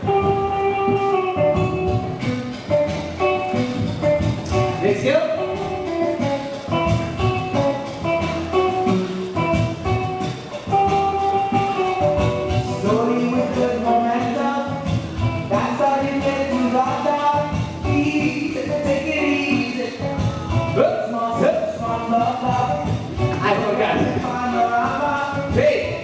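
Nothing goes wrong here that I can hear, and the only sign of the call path is the top end stopping at 8 kHz, which fits a wideband G.722 link doing its normal job.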